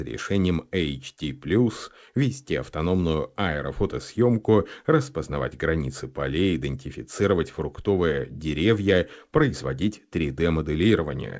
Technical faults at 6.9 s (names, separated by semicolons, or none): none